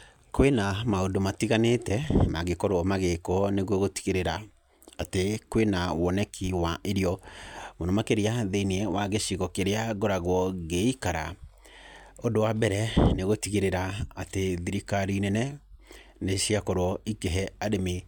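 No technical faults are audible.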